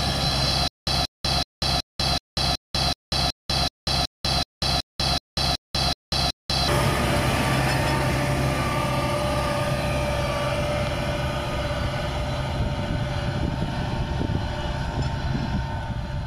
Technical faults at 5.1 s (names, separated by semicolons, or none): stutter with silent gaps